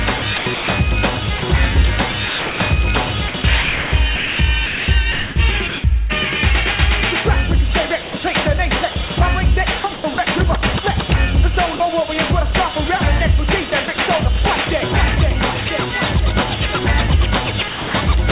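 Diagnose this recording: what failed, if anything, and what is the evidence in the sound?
Sound chopped by the voice detector, at the call-processing stage, runs through three stretches: 0.18 to 5.84 s, 8.02 to 10.18 s and 13.7 to 13.98 s. Within them, pieces of the sound give way to a synthetic hiss, about 1.86 s in total in the first stretch, 0.36 s in the second and 0.06 s in the third. The likely cause is the sender's voice activity detector repeatedly gating transmission off and on, with the receiver filling each gap with comfort noise.

Sound dropped by the voice detector, also at the call-processing stage, appears twice: a 40 ms gap from 11.76 to 11.8 s and a 0.26 s gap from 17.68 to 17.94 s. Each time the sound gives way to comfort noise and then resumes. The likely cause is the detector classing the low-level sound as background and stopping transmission until it triggered again, with comfort noise played in its place. 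The call path itself passes nothing above 4 kHz, which fits a 64 kbps G.711 mu-law codec.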